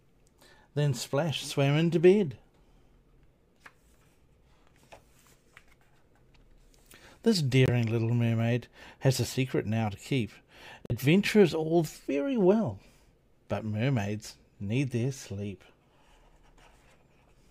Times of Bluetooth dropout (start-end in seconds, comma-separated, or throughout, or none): 7.66-7.70, 10.86-10.92